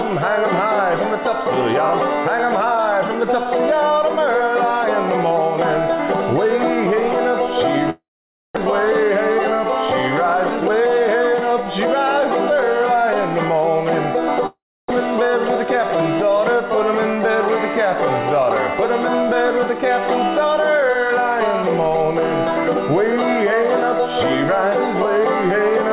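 From 7.9 to 8.59 s, the sound smears into a fading buzz, then goes silent. This is likely a long network dropout: about 0.4 s never arrived and is skipped.

From 10.56 to 11.87 s, a jitter buffer speed-up plays the audio about 12% faster at unchanged pitch. Short pitch-period pieces, roughly 0.15 s in total, are cut, so it sounds hurried.

From 14.46 to 14.97 s, the same long network dropout occurs, again a likely cause. A brief fading buzz gives way to about 0.3 s of silence, and about 0.4 s of audio is lost.

Throughout, nothing is heard above 4 kHz, which fits a narrowband G.711 call codec.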